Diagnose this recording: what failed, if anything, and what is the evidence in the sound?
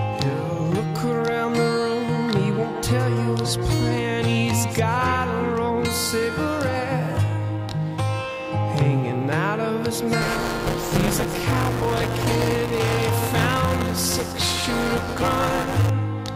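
The driver or buffer stage failed with buffer tearing from 10.21 s to 15.90 s: a steady robotic buzz at 188 Hz rides on the sound, which fits a 256-sample buffer. The writer and reader pointers have crossed, so a small slice of each period repeats audio about 10 ms old, with hard joins.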